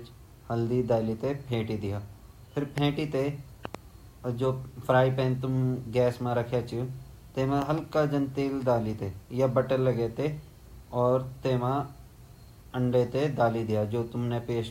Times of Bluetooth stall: none

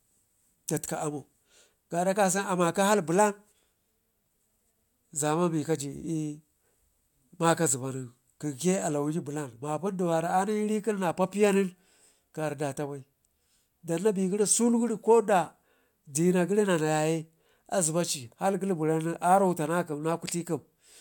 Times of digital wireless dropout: none

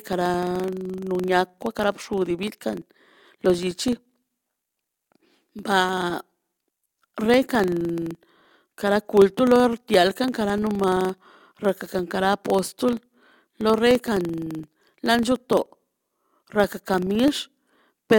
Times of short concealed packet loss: none

